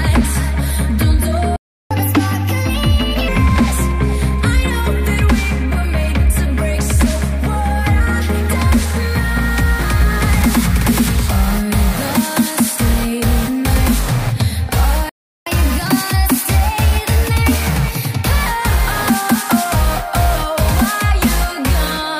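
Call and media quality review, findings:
Playback stall, 1.56–1.91 s: audio cuts to silence mid-flow for about 0.34 s, then resumes. Likely player buffer underrun or blocked output thread starving the device.

Playback stall, 15.09–15.47 s: same symptom, silence for about 0.37 s before audio continues. Likely the same underrun or blocked-thread condition in the player.

Catch-up at higher speed, 1.91–3.28 s: immediately after the first dropout, audio runs fast and high, 1.25x speed, pitch up roughly four semitones, then settles. Player resampling its backlog to recover lost time.

Catch-up at higher speed, 15.47–18.47 s: after the second dropout, audio plays slightly fast and sharp, 1.1x speed, pitch up about a semitone and a half, for 3 s. Same resampling drain of queued audio.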